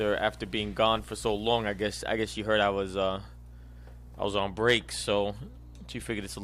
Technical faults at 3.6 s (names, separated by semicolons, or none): none